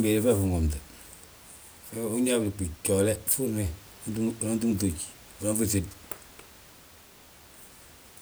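No technical faults can be heard anywhere in the recording. Background noise from the room sits about 25 dB below the speech and belongs to the recording itself rather than to the system.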